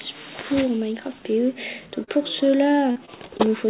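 At 2.04 to 2.09 s there is a short concealed packet loss: about 40 ms of audio failed to arrive in time, and the receiver patched roughly 32 ms of it by extending the preceding sound before fading back into the real signal. It is heard as a brief smear or wobble. On a spectrogram the sound runs on unchanged for that instant; the waveform shows a patch with a soft join.

From 2.91 to 3.41 s the losses recur as repeated packet loss, giving a choppy, robotic quality. Four separate holes, the longest about 41 ms and about 100 ms missing in total, were each filled by continuing the last sound, so roughly a fifth of that half-second is synthetic. A spectrogram shows repeated frozen, smeared blocks breaking the normal texture, and the waveform shows stretches of continued, patched sound. Across the whole clip nothing appears above 4 kHz, which fits the G.711 A-law call codec at 64 kbps.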